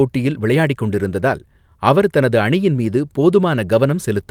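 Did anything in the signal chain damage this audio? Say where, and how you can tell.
No, nothing in the chain seems to have left a mark on this speech, so there's no damaged stage to point to.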